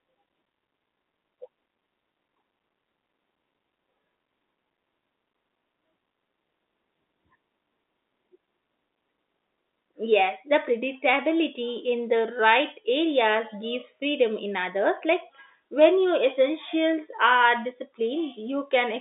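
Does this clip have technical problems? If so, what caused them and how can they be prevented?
No, this clip has no technical problems, so there is nothing to prevent.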